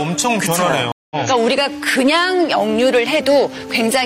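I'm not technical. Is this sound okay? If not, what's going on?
No. Throughout the clip, the loudest moments have a faint crackle or slight roughness. This is hard clipping: the sound is a little too strong for the equipment, so its tallest peaks get sliced flat. It's mild here, affecting only a small share of the sound.

At about 0.92 seconds the sound cuts out for roughly 0.19 seconds, then comes back at 1.16 seconds with a small piece skipped. That's a stream reconnect: the connection dropped, the player went silent, then rejoined slightly further along.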